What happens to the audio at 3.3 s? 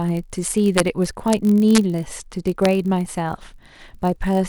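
At 3.3 s the speech carries a block size mismatch (padded), present throughout. Zero-filled gaps in each block cause a 46.9 Hz buzz, fitting a 1024-sample read block. Pitch and speed stay about normal.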